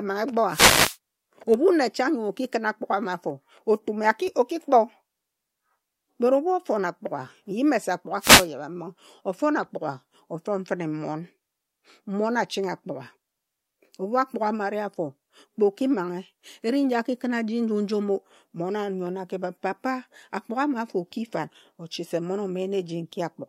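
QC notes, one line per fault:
0.48–0.97 s and 8.19–8.48 s, wireless microphone noise hit: the FM radio link fades and receiver hiss rises under the speech, a broadband smear on the spectrogram.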